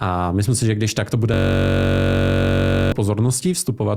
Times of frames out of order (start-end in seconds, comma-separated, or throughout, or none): none